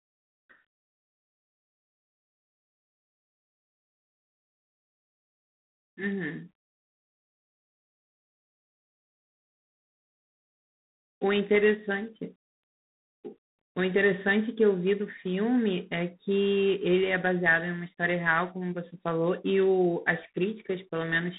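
Throughout the speech, G.726 ADPCM coding is plainly audible. A harsh, rasping hiss rises and falls with the speech level, which fits the coarse 3-bit difference coding of 24 kbit/s. The line band spans 150 Hz to 3.7 kHz, with nothing above 3.8 kHz.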